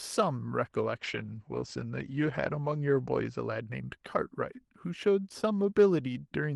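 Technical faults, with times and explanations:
0.99–3.87 s call bitrate drop: the encoder gets fewer bits, so the audio turns coarse and muffled as its top falls from 12 kHz to 8 kHz, with no gaps, unlike packet loss.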